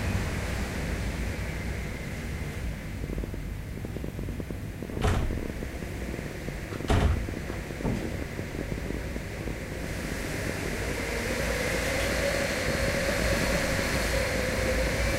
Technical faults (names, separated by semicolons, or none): train of clicks